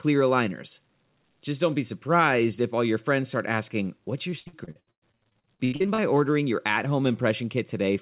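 From 4.3 to 6.0 s the speech turns choppy and robotic, ending just before "ordering your at". This is repeated packet loss: 20 gaps, the longest 110 ms, were filled by extending the preceding sound, so nearly half that stretch is concealment. Nothing is heard above 4 kHz, which fits a narrowband telephone codec.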